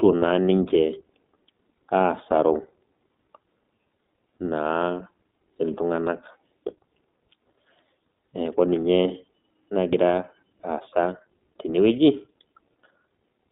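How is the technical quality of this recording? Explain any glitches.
The speech is band-limited, slightly rough and synthetic throughout, with three very short buzzy holds where the signal briefly stalls.

iLBC codec: The sound is thin and telephone-like, with a faintly rough, synthetic edge. The band runs only from about 200 Hz to 3.7 kHz. This is narrowband iLBC coding, which fits its 15.2 kbps mode with 20 ms frames, each coded independently.

Lost iLBC frames: At 0.68 to 0.72 s, 6.90 to 6.92 s and 10.16 to 10.18 s, a frame of about 20 ms drops out. The decoder fills each gap by repeating the last pitch cycle mixed with noise, heard as a brief buzzy held vowel. Clean sound returns at once.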